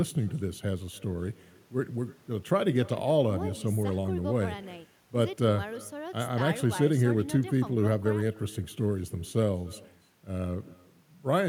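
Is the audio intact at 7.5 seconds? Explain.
No. Echo with no canceller runs through the whole clip, including 7.5 s: the far end's loudspeaker feeds its microphone and nothing removes it, so the speech returns roughly 300 ms later as a faint, thin copy about 24 dB down.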